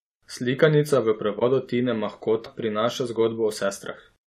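At 1.38 to 1.42 s, compressed frames are skipped. Roughly 20 ms of speech never plays, so the talk jumps forward. At 2.45 to 2.47 s, it happens again on a larger scale. Around 150 ms goes missing. The speech lurches ahead, and part of a sound is lost. The frames were absent or rejected by the decoder.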